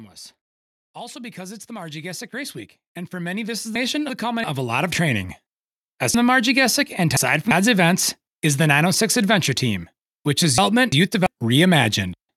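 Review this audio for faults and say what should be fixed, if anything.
Automatic gain rising runs from 0.94 to 5.35 s. The gain control treats the input as too quiet and lifts it by about 18 dB, so the speech and the background noise swell together. On the waveform the envelope widens steadily; on a spectrogram the noise floor brightens along with the voice. To prevent it, set a fixed input gain, or slow the control's attack and cap its range.

Chunks out of order occur at 3.76–4.44 s, 6.14–7.51 s (just before "events is the") and 10.58–11.26 s (just after "which is"). A 0.34 s chunk plays one, three and one chunk late, respectively. Nothing is lost, but each passage sounds jumbled, with three hard joins. On a spectrogram these show as vertical broadband lines and broken formant tracks. To prevent it, have the player or recorder sequence-number the chunks and reorder them before playback or writing.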